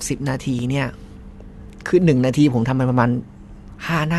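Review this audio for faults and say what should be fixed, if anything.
At 0.59 s the speech has a sharp tick, a block of digital silence. The signal drops straight to silence for 4.4 ms and jumps back with no fade. A gap this short points to an output buffer that wasn't filled in time. To prevent it, give the audio processing more buffer headroom or higher scheduling priority so the output is always filled before playback needs it.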